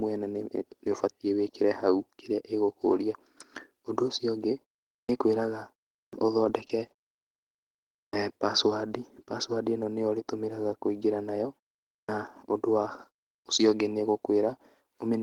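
In this speech clip, the first sounds after short silences are chopped off abruptly at 5.04, 6.07, 8.08 (before "password password"), 12.03 and 13.40 s. That is clipped start after a pause: roughly 50 to 59 ms is lost each time because the output path needs time to wake after pauses of 0.37 to 1.23 s. Between 6.44 and 7.50 s the sound turns choppy and robotic, with brief holes patched by extending the preceding sound. That is repeated packet loss, pointing to about ten gaps of up to 20 ms, with about 11% of the stretch concealed.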